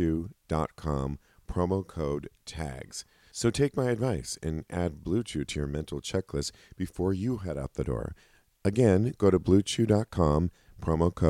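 Nothing goes wrong anywhere in this speech recording; there's no point where the audio stumbles, drops out or changes character.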